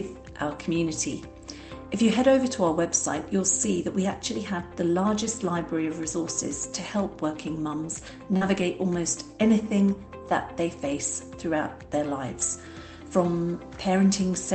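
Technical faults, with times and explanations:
7.77 to 8.63 s, lost packet rebuilt from error correction: nine separate 20 ms stretches sound rougher and noisier, with no gap in the sound. Each lost packet was replaced by the low-bitrate copy carried in the following packet (Opus in-band forward error correction), so the decoder played that coarser version.
8.37 to 8.43 s, short concealed packet loss: a brief smear or wobble where 40 ms of audio never reached the decoder in time. The receiver filled 42 ms by continuing the preceding sound, from its pitch if voiced or as shaped noise if not, then blended back into the real audio.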